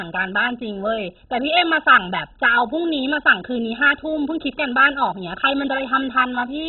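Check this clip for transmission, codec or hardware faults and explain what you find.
There is one fault, and it runs throughout the speech. The damage is heavy and sounds like MP2 compression. Nothing is heard above 4 kHz, so the speech is dull. Starved of bits, the encoder likely shut off its upper sub-bands, which fits a rate near 16 kbps. The bands left are coarsely quantised, giving a gurgling, granular distortion.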